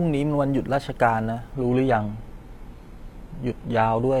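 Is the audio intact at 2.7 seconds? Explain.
No. At 2.7 seconds the speech sits inside a stretch where an adaptive stream dropped to a lower bitrate, running from 1.54 s to the end of the clip. When the connection slowed, the player switched to a leaner encoding without any gap, so quality falls abruptly at 1.54 s. From there nothing is left above 14.9 kHz, and the top end sounds thin, which fits a low-rate HE-AAC stream replacing a fuller AAC one.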